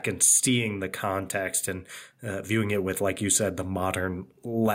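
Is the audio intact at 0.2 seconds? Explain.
No. At 0.2 seconds the clip is already affected by gain pumping, which runs through the whole recording. The likely cause is input gain set far too high, with a fast limiter or compressor clamping the level down each time the speech gets loud. The level swings by around 5 dB as a result, leaving the speech squashed and uneven in its breathing.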